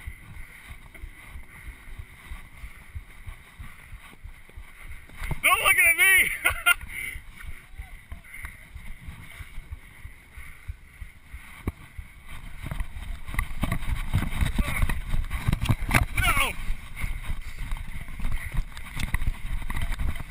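From the start to 3.82 s there's a doubled audio track, a full-band copy about one and a half seconds late and somewhat quieter, likely from a second, slower capture path.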